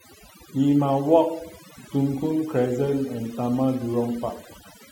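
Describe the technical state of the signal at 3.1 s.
At 3.1 s, overdone noise removal is active, as it is throughout. Aggressive noise reduction strips bands near the noise floor, leaving twinkling specks in the background.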